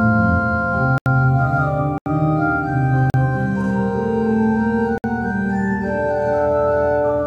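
The music drops to blocks of digital silence at 0.98–1.06 s, 1.98–2.06 s, 3.10–3.14 s and 4.98–5.04 s, likely where the program did not fill the output buffer in time. Unlike a faded dropout, each hole cuts out and back with no fade.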